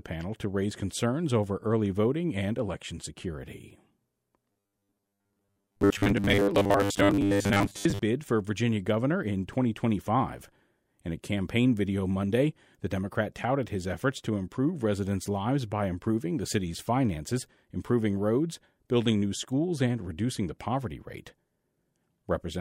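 From about 4.52 to 8.04 s the speech goes robotic, the classic sound of repeated short buffers. The voice flattens into a stiff, metallic buzz at 100 Hz that only loosely tracks the words. What's likely happening is that fresh audio isn't arriving in time, so the software keeps replaying the last chunk, which fits a 10 ms buffer, and skips a big share of the real audio, something like two-thirds or more of it.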